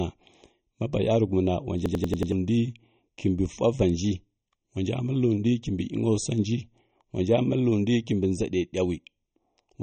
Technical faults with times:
0.00-9.83 channel delay (comb filtering)
0.00-9.83 MP3 compression
1.86-2.32 system hang loop

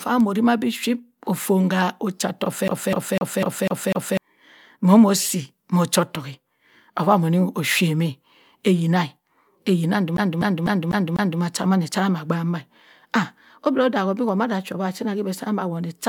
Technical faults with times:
2.68-4.17 CD stuck on one turn
10.17-11.41 CD stuck on one turn

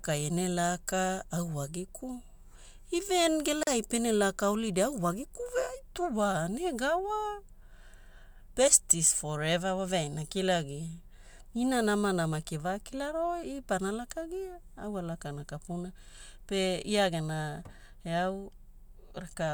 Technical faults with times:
3.63-3.67 gap at a join of encoded pieces

